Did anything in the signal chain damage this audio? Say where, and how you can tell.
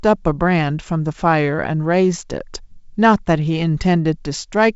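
No, nothing damaged this audio.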